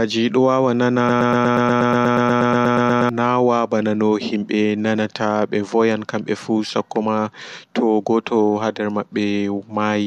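A stalled player or stream in this speech clip likely kept resending the last fragment it held, producing a broken-record loop from 1.09 to 3.09 s: a 120 ms slice repeats exactly 17 times back to back. The speech that belonged there is lost, and normal audio resumes at "nawaa ɓanano".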